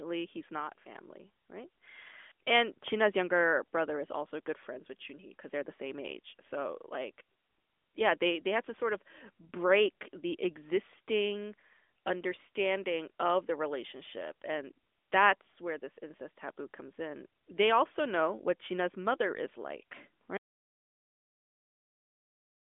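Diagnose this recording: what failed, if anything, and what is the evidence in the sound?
The failure is an audio dropout to silence, starting at 20.37 s just after "mother is like" and running to the end of the recording. The speech stops mid-phrase and leaves silence with no room tone. On the waveform the trace drops abruptly to a flat line, and the spectrogram goes completely blank, with no residual noise floor, even below the 3.6 kHz ceiling of the narrowband AMR channel. The likely cause is the input being lost upstream, such as a disconnected device or failed link, while the recorder kept writing silence.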